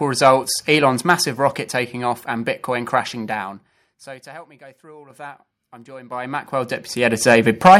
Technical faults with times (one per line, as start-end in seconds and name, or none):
0.25-0.29 microphone overload
1.02 microphone volume stepped down
1.10-1.12 microphone overload
5.10 microphone volume stepped up
6.12 microphone volume stepped up
7.31-7.35 microphone overload
7.65-7.77 microphone overload
7.68 microphone volume stepped down